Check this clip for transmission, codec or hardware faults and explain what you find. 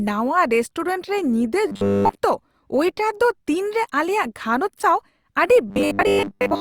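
The speech has robotic sound from repeated short buffers in two places, from 1.67 to 2.20 s and from 5.68 s to the end at 6.60 s. The likely cause is audio arriving too seldom, so playback filled the gaps by looping a 10 ms slice, skipping most of the real signal. That loop imposes a fixed 100 Hz buzz, turning the voice into a rigid metallic buzz that only loosely tracks the speech.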